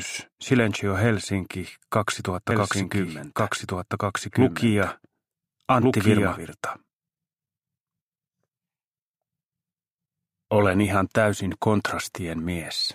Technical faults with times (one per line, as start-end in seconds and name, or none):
2.51-6.37 doubled audio track